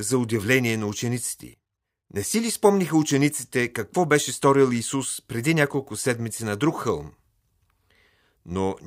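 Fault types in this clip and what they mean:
None detected: no audible technical fault anywhere in the recording.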